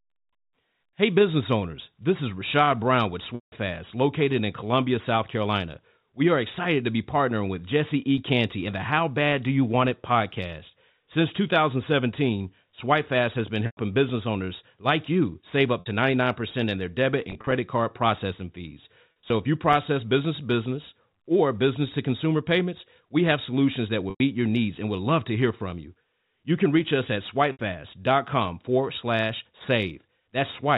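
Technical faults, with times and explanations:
3.35–3.52 s, 13.66–13.77 s, 15.80–15.86 s (after "like you save up"), 17.30–17.52 s (between "in their debit" and "card processing fees"), 19.12–19.30 s, 24.10–24.20 s and 27.52–27.59 s, packet loss with pitch repetition: gaps of 60 to 170 ms are filled by repeating the last pitch cycle, giving a held, buzzy tone. The 170 ms gap at 3.35 s fades toward silence after about 50 ms. At 17.30 s and 19.12 s the losses are scattered in short runs.
8.18 s and 19.73 s, block of digital silence: the output drops abruptly to silence for 2.9 ms and 0.73 ms, which fits 128-sample and 32-sample blocks. Gaps this short are heard as brief ticks or dips rather than audible holes.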